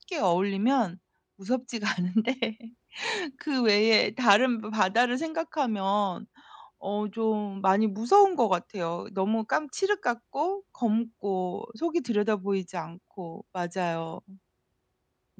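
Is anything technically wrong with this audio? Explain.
No, nothing technically wrong can be heard here.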